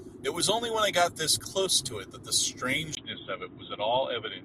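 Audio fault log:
2.95–4.45 s, input switched to a poorer device: the capture path likely changed mid-recording to a different microphone or a headset call profile. After a brief dropout of about 20 ms, the speech turns dull and boxy because nothing above 3.8 kHz gets through, which strips the sibilance and air from consonants. The loudness stays about the same, but a faint new background noise sits far beneath the voice, carrying the new device's own character.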